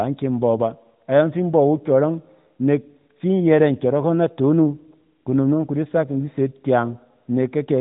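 No technical faults are audible.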